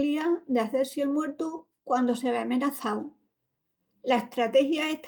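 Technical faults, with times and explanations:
1.57 s and 2.81 s: lost packet rebuilt from error correction. A 20 ms stretch turns briefly rougher and noisier, first just before "quandu se ve" and then just after it. Each fits one lost packet replaced by the low-bitrate copy in the next packet, so nothing drops out.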